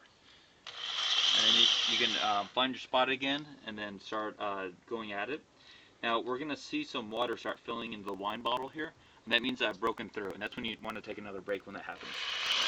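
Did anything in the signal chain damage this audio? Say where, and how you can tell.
Yes, at the driver or USB stage. From 7.11 s to 12.63 s there are periodic USB or driver dropouts: regular ticks every 54 ms, around a hundred of them. Each marks a chunk of around 10 ms skipped outright as a blocked bus or driver briefly stalls.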